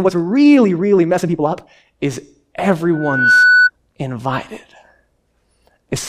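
Time-stretched section from 0.0 to 1.84 s: this speech recording runs at 1.62 times its normal pace with unchanged pitch, sounding rushed, likely from software dropping short pieces to shorten it. Loudspeaker feedback squeal from 2.93 to 3.70 s: a 1.5 kHz tone swells over roughly 0.4 s to about 5 dB above the speech as the microphone re-amplifies its own loudspeaker.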